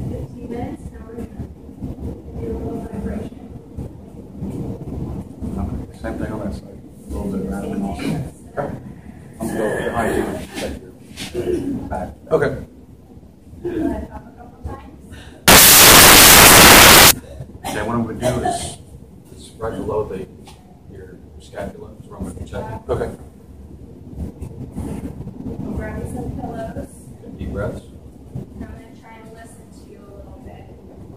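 Between 15.48 and 17.11 s the reader assembles each sample from the wrong bytes, whether shifted by one byte, taken in reversed order or read at the wrong alignment, so the rapidly changing low-order bits end up as the most significant part of every value. For those 1.6 seconds the audio is replaced by loud, harsh broadband noise, then the clip resumes abruptly.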